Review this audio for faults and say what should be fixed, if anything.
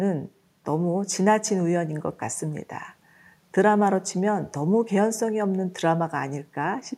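Nothing stood out on listening to this speech recording, so there is nothing to fix.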